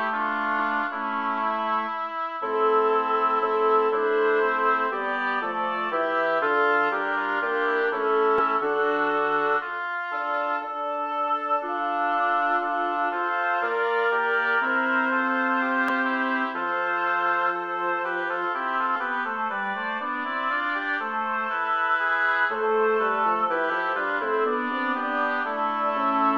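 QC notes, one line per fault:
0.58, 8.38–8.40, 15.88, 18.95 and 23.69 s, damaged data in a compressed stream: brief glitches of about 14 to 20 ms where corrupted bytes make the decoder misread frames and resync.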